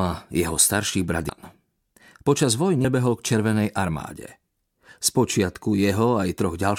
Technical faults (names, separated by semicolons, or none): compressed frames skipped